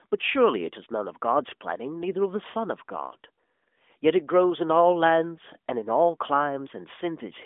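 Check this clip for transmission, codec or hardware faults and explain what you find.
No transmission, codec or hardware faults can be heard in this speech clip. It comes through an AMR narrowband mobile codec, whose telephone band runs from about 250 Hz to 3.5 kHz, and at a rate that fits 12.2 kbps its coding leaves only light marks on the sound.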